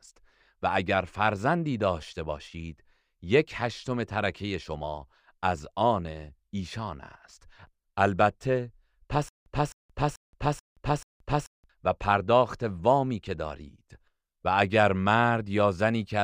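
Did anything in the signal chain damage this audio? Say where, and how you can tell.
Yes. From 9.29 to 11.70 s the same 260 ms burst of speech repeats five times, each followed by about 176 ms of digital silence at a steady 435 ms period. This stutter with silent gaps likely comes from a playback or streaming stall. The true-silence gaps rule out network loss concealment, which fills dropouts with smeared sound.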